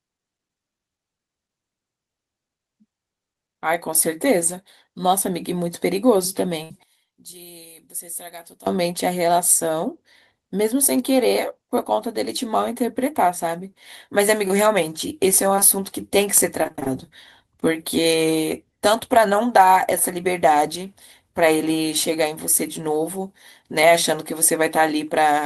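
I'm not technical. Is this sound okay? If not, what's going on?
No. There are four problems in this speech recording.

At 6.63 to 6.71 s, the sound is briefly held and fades, and then the speech carries on slightly further along. This is a burst of packet loss. A short run of the recording's data, about 60 ms, never arrived in time. The receiver stretched the last sound to cover the hole, so that bit of speech is simply missing.

From 6.83 to 8.67 s, the voice suddenly drops to a faint version of itself, as if it had stepped far away. The likely cause is one channel inverted. One of the two stereo sides is flipped upside down. When the sides are combined, the voice, which sits equally in both, largely cancels itself out, leaving only a weak ghost.

Around 15.55 and 15.59 s, there are two tiny blips, like a quick smear or wobble in the voice. Each is a short concealed packet loss. A sliver of sound, about 20 ms each time, went missing. 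The receiver patched it by continuing the previous sound and blending back in, so a short consonant there may sound softened or vanish.

From 16.63 to 16.88 s, the voice turns choppy. This is repeated packet loss (robotic sound). Six small pieces dropped out in quick succession, the longest about 29 ms. Each hole was patched just before the next one arrived, so roughly half of that quarter-second is filled-in sound rather than the real voice.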